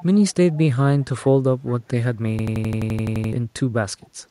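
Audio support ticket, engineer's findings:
Faint delayed copy of the speech trailing behind itself, 0.00–0.34 s, 0.52–0.59 s, 1.01–1.05 s, 4.01–4.07 s. Lag about 0.4 s, level roughly 25 to 40 dB under the speech. Echo leak, likely far-end loudspeaker pickup the echo canceller didn't fully remove.

Rapid machine-gun stutter 2.39–3.33 s, one 85 ms fragment repeating at 11.7 Hz about eleven times, around a second of speech lost. System hang loop: host/driver stall while the sound hardware kept cycling its ring buffer, which fits a 4096-sample buffer.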